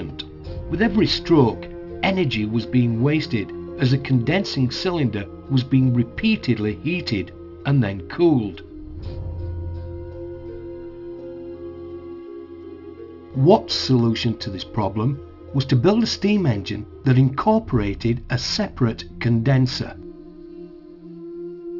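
Aliasing runs through the whole clip. Content above 6 kHz was never filtered out before the rate dropped, which fits a 12 kHz sample rate. It folds back below 6 kHz as unrelated tones, roughly 20 dB down. Highs turn gritty and metallic.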